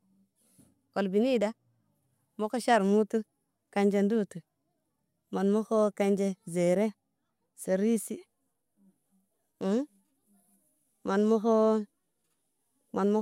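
A listener hears a speech recording whose signal carries no audible technical fault at any point.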